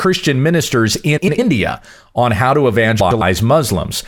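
At 1.17–1.39 s and 3.00–3.22 s, frames out of order swap two adjacent runs of about 105 ms each, giving garbled flutter. Unlike a dropout, no time is lost.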